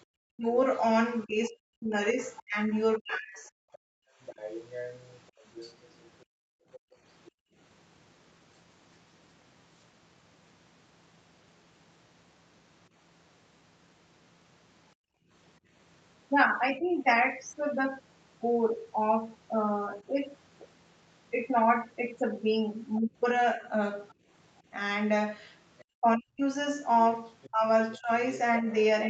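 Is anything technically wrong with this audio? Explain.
Yes, there are a few echo-canceller problems in this speech, all sitting on top of a call path that tops out around 8 kHz, which fits a wideband call codec.

Speech suppressed in double talk shows up from 0.31 to 3.47 s and again from 23.01 s to the end. The talker's speech dips, thins out or breaks into pieces, with the deepest drops around 40 dB in the first stretch and around 35 dB in the second. The first stretch adds up to about a second and a half of affected speech. It's likely that both ends were talking at once and the canceller, unable to separate the talker from the loudspeaker echo, pulled everything down.

The other side's voice is leaking through from 1.46 to 7.31 s and from 24.09 to 28.73 s. A second voice sits under the talker, roughly 15 dB down in the first stretch and about 20 dB down in the second. This is likely residual echo: the far end's audio coming out of the loudspeaker, getting back into the microphone, and not being fully cancelled.

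Background gated by the echo canceller hits at 3.78 to 7.57 s, 14.95 to 15.3 s, and briefly at 24.14 to 24.27 s. The room tone drops out and comes back, by about 34 dB, about 33 dB and about 14 dB respectively, with the first stretch totalling about a second and a half. While the loudspeaker was playing, the canceller clamped the microphone hard, so the ambience vanishes until it lets go.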